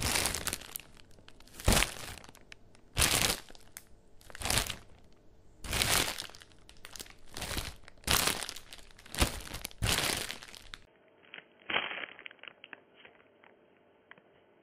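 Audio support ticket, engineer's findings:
Input switched to a poorer device, 10.85 s to end of clip. Brief 20 ms dropout at the switch, then band-limited audio with nothing above 3.2 kHz, level shift of around 5 dB, new background noise roughly 50 dB under the signal. Likely cause: capture moved to a narrowband input, such as a headset call profile or a second microphone, with its own tone, gain and noise.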